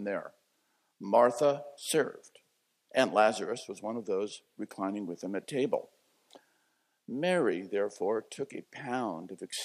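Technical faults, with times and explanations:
0.71 to 8.75 s, word clock ticks: there's a steady run of ticks, about one a second, so roughly ten in all. The receiving end is running on its own clock instead of locking to the sender, and the two drift apart by something like 20 ppm. Each time they slip a full sample past each other, one sample gets dropped or repeated, and that tiny discontinuity is what clicks at that regular, metronome-like pace.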